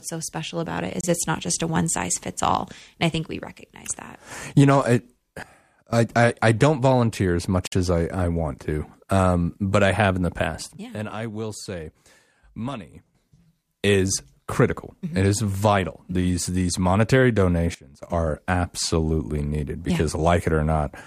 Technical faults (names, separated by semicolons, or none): Bluetooth stall; sudden gain jump